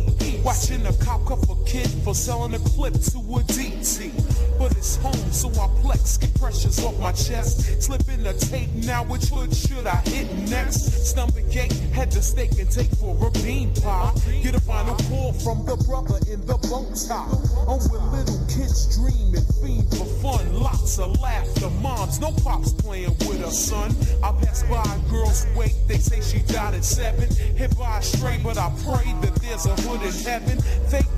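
From 15.47 to 19.95 s the sound turns hollow and thin. This is channel delay, heard as comb filtering. One channel lags the other by a fraction of a millisecond. Summed to mono, they cancel at evenly spaced frequencies, starting around 3 kHz.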